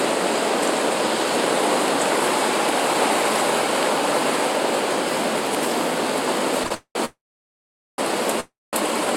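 At 6.67 s comes a short stall from a late packet. For about 37 ms the last bit of sound is held and stretched, with a slight buzz or dip, because the packet was not there in time and the jitter buffer ran dry. Nothing is lost, and the sound carries on from the same point. It stays a brief smear and never drops to silence, unlike the longer events that follow.

From 6.74 s comes a run of call audio freezes, likely from packets held up in transit so that the buffer emptied again. The first lasts from 6.74 to 6.97 s, the second from 7.05 to 8.00 s, and the third from 8.40 to 8.75 s. Each time the last sound is continued as a buzz or hiss that fades out. The silence lasts about 80 ms in the first, 820 ms in the second, and 200 ms in the third. The sound then resumes exactly where it stopped, so gaps are inserted rather than anything being skipped. The fade into real silence is what sets these apart from the short stall.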